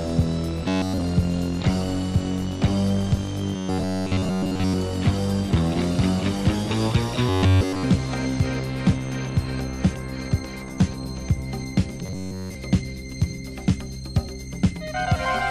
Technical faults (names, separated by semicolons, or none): robotic sound from repeated short buffers